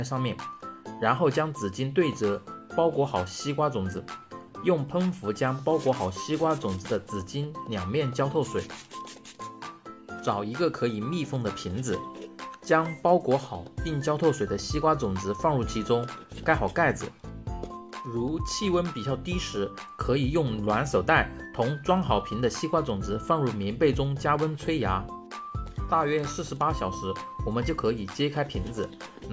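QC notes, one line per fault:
No audible faults detected in this clip.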